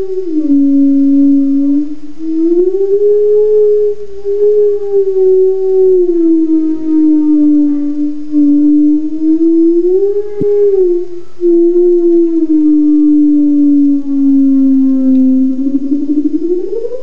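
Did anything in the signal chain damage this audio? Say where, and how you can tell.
Yes. At the codec stage, a corrupt frame was decoded: a short run of compressed frames, about three, arrived with flipped bits, and the decoder played them instead of concealing them. From 10.41 to 10.43 s a brief burst breaks into the audio. Misread gains and spectral codes placed energy at frequencies that don't belong there for the length of those frames, which is heard as a glitchy chirp or burst of noise.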